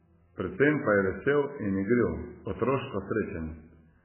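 From start to finish the speech carries heavy MP3 compression damage, with nothing present above 3 kHz, so consonants lose their edge and the sound is dull. Weak frequency lines drop in and out between frames, giving a watery, swirling texture, and onsets smear. The damage is likely from encoding at a very low rate, which fits about 8 kbps, where the encoder cuts the top band and discards detail to stay within budget.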